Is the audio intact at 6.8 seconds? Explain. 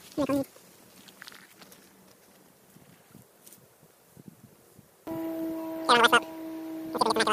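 No. At 6.8 s, as throughout the clip, a wrong sample rate is at work: audio captured at 16 kHz plays at 44.1 kHz without conversion, so everything runs 2.76 times fast and about 17.6 semitones high. Unlike a pitch shift, tempo rises together with pitch.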